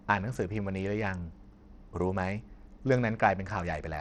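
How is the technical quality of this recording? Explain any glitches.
The speech is audibly degraded throughout: treble flickers in and out over gritty, grainy noise, which likely points to Bluetooth SBC compression at a starved bit pool, around 80 kbps.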